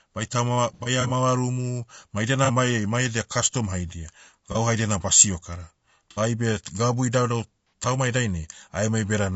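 Throughout, the speech was likely passed through low-delay AAC compression at a low bitrate. Its short frames resolve the voice's harmonics poorly, leaving it plainly rough and grainy.

AAC frame loss with concealment recurs, and each time the decoder rebuilds missing audio from the last good spectrum, producing brief smeared, noisy patches:
from 0.74 to 1.11 s, where about 150 ms goes missing in bursts of up to roughly 70 ms;
from 2.45 to 2.50 s, after "ma idia";
from 4.52 to 4.57 s, between "mai edia kastom haidia" and "haidia na basio";
from 6.11 to 6.19 s;
and from 7.67 to 7.73 s, after "gabu idaudau".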